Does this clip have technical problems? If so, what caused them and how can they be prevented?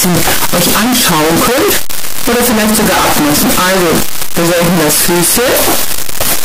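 Yes. Signed and unsigned mixed up, throughout the clip: the sound is buried under very loud, harsh distortion, and quiet passages come out as loud as everything else. Each zero crossing appears to jump across the full range, so the cause is likely 8-bit samples read with the wrong sign convention, which flips the top bit of every sample. Prevent it by declaring sample signedness explicitly at every export and import step.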